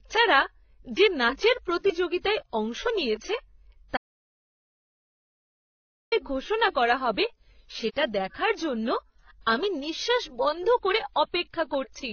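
An audio dropout to silence runs from 3.97 to 6.12 s in this speech recording, removing about 2.15 s mid-flow. The sound stops abruptly and returns just before "ঘোষণা করা হবে সেটা", and the gap between is silent with no room tone. The likely cause is that the input was lost, through a disconnected device, failed link or accidental mute, while the recorder kept writing silence. Throughout the clip there is also transcoding between lossy codecs. Nothing is present above 6.5 kHz, and two layers of artefacts are heard together: the first codec's artefacts with the second codec's own artefacts over them. This is likely from a very low-bitrate AAC-style encode, around 16 kbit/s, later re-encoded to WMA at a higher rate. The second codec could not restore the lost top end and spent bits reproducing the first codec's damage.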